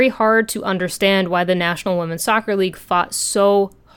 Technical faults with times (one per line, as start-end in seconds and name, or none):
none